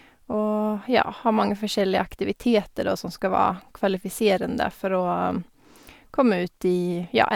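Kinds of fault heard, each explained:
No technical fault is audible anywhere in the speech recording.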